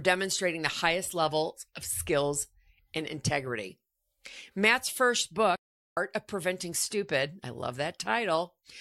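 Speech clip with one playback stall: from 5.56 to 5.97 s the audio drops out for about 410 ms, likely because the player starved for data or its thread was blocked, then picks back up.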